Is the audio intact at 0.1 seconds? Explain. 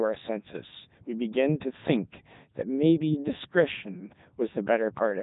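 No. At 0.1 s the speech carries Codec 2 vocoder damage, present throughout. It is rebuilt from sine waves, sounding heavily robotic and buzzy, consistent with 3.2 kbit/s.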